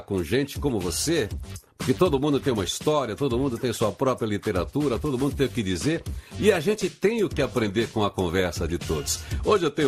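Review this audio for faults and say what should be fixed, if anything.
Throughout the clip the sound is dull and carries a gurgling, granular distortion, most likely from MP2 compression at a low bitrate, consistent with about 80 kbps. MPEG Layer II divides the signal into 32 sub-bands and, when bits run short, drops the upper bands and quantises the rest coarsely. On a spectrogram the top end appears cut off in blocky steps, with upper bands flickering in and out as rectangular patches. Prevent it by keeping a lossless master or encoding at a much higher bitrate.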